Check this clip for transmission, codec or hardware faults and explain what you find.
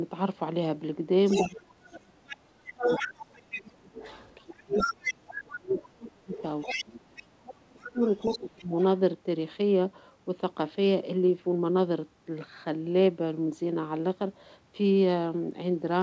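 Two echo-related faults are present in this speech clip, both pointing to a speakerphone with an imperfect echo canceller. The bandwidth stops at 8 kHz, consistent with a G.722 call path at 64 kbps.

Other side's voice leaking through, from 1.27 to 7.23 s and again from 7.86 to 8.84 s: a second voice sits under the talker. In the first stretch it is nearly as loud as the talker; in the second it is well below. Its likely cause is loudspeaker playback reaching the microphone and only partly cancelled.

Speech suppressed in double talk, from 1.42 to 8.8 s: while both sides are audible, the talker's level repeatedly sags, at worst by about 30 dB, for about five seconds in total. The echo canceller likely could not tell near-end speech from echo and attenuated both.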